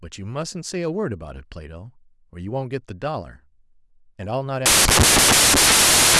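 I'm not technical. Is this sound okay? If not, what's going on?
No. From about 4.66 seconds to the end of the speech, the sound turns into loud hiss, like static. This fault is called samples built from the wrong bytes. Each tiny piece of digital audio is stored as a few bytes. Here the player puts those bytes together in the wrong order or from the wrong starting point. The smallest, fastest-changing details become the biggest part of the sound. So the speech is buried under harsh noise.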